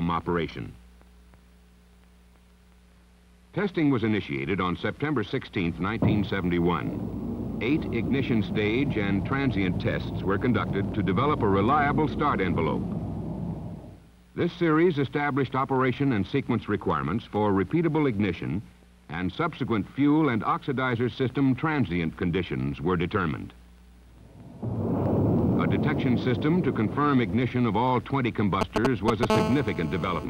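At 28.61 s, GSM signalling bursts break in and last until 29.25 s. A 2G phone close by is sending short groups of radio bursts, as it does before a call or a text comes in. The audio circuit rectifies those pulses and turns them into sound. The result is a galloping dit-dit-dit of short buzzes at 217 Hz. They sit roughly 5 dB above the audio, so they stand out clearly.

From 29.30 s to 30.25 s, a GSM phone buzz follows. Now the phone is in a call and transmits its bursts 217 times a second without a break. The circuit rectifies them again, giving a hard, raspy 217 Hz buzz full of harmonics. It has nothing to do with the audio underneath. It holds nearly steady and runs about 4 dB below the audio.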